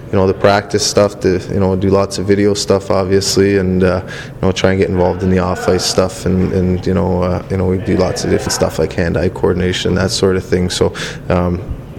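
At 8.46 s the audio jumps forward: compressed frames are skipped, and about two frames, roughly 70 ms of sound, never play. The jump fits a 32 ms frame length. The frames were either missing from the file or rejected by the decoder as damaged. That jump ahead, with no gap of silence, is what sets it apart from a plain dropout or a sample-level splice.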